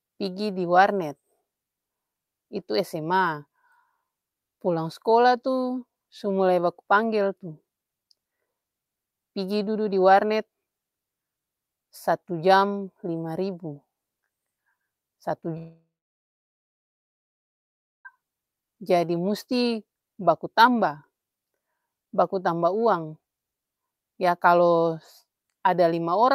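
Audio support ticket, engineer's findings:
Long network dropout, 15.57 to 18.07 s. Speech cuts out for about 2.5 s. Brief fading buzz carries the last sound on, then roughly 2.2 s of near silence. Likely network path: receiver stopped getting packets and concealed with a decaying repeat of the last audio. Resumes past the gap, about 2.48 s of speech never played and not recovered.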